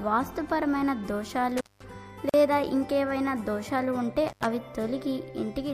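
Intermittent contact at 1.57 to 1.84 s: a loose connection opens for about 198 ms, cutting the sound to faint hiss, with crackle at both edges.

Gap at a join of encoded pieces at 2.29 to 2.34 s: separately encoded sections, recurring every 4.0 s, were joined with untrimmed encoder delay and padding, opening a 44 ms silence with smeared edges.

Intermittent contact again at 4.28 to 4.46 s, opening for about 81 ms.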